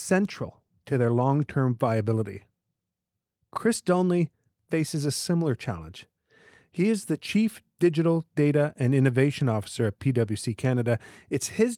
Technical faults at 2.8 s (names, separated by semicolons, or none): none